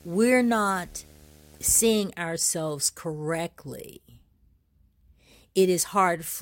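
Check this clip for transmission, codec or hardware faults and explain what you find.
There's one fault here, a video or display buzz over the first two seconds, from 0.0 to 2.0 s, clearing just before "ourselves correctly". A screen or its video cable is coupling into the audio path, so you get a buzz at the picture's field rate, 75 Hz here, with a layer of hash riding above it. It sits roughly 30 dB below the speech, so it's underneath the talker as a steady drone.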